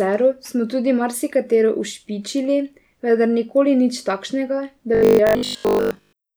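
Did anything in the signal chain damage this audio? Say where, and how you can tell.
Yes. From 4.95 s to the end at 6.37 s, the speech turns into robotic sound from repeated short buffers: a rigid metallic buzz at 50 Hz. The likely cause is a driver or buffer underrun looping 20 ms blocks in place of most of the audio. A spectrogram would show flat harmonic stripes spaced 50 Hz apart, and the waveform would show identical repeating cycles.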